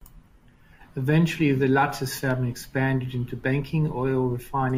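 At 2.31 s, just before "expanded into", a block of digital silence about 0.5 ms long cuts the speech out and back with no fade. It is too brief to hear as a gap, so it registers only as a tick or dip.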